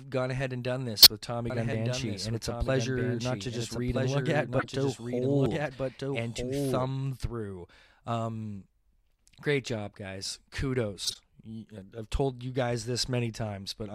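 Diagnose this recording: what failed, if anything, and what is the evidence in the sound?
Corrupt frame decoded, codec stage, at 1.02–1.10 s, 4.59–4.68 s and 11.04–11.16 s: brief chirps, several frames each, as damaged frames were decoded with garbled spectral data.

Doubled audio track, from 1.50 to 6.91 s: a dry copy of the speech, about 5 dB quieter and about 1.5 s late, starts and stops abruptly, likely from a second capture path.

Dropped buffer (overrun), driver stage, at 1.73 s, 5.46 s and 11.82 s: skips of roughly 70, 20 and 20 ms, likely from samples overwritten before being read.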